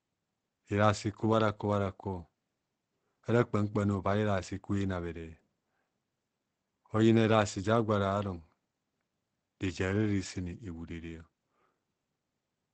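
Opus compression runs through the whole speech clip, and the damage is plainly audible. The sound is muffled and hoarse, with nothing above about 8.9 kHz, which points to a wideband speech-mode encode at roughly 16 kbps. At so few bits the encoder likely switched from its music coding to its SILK speech model, which rebuilds the signal from a simplified voice model. That removes the top octave and leaves the voice hoarse.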